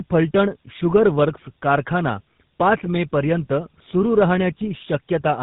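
From start to finish the speech sounds rough, muffled and warbly, with nothing above 3.8 kHz. This is tandem speech coding: the sound fits a call that passed through two speech codecs in a row, an AMR-NB stage and then a GSM full rate stage, with a G.711 link between them. Each coder re-encoded the already degraded output of the one before, so their artefacts stacked.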